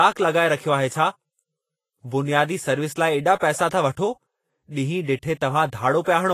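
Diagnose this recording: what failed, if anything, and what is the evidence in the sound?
Codec stage, and it's likely Vorbis compression at a low bitrate, around 30 kbps. Through the whole speech clip the treble sounds hissy and grainy, with nothing above 14.2 kHz. The encoder has thrown away fine high-frequency detail and replaced it with coarse noise of similar energy.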